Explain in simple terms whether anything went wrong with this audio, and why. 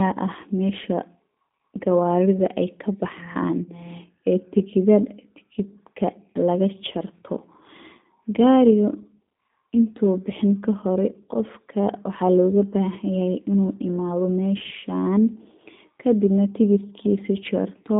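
The whole recording has passed through the G.729 codec, a phone-call compressor that rebuilds speech from a rough model of the mouth and a few pulses. Nothing above 3.8 kHz survives, and unlike simple phone-line muffling, the speech also sounds rough and synthetic throughout.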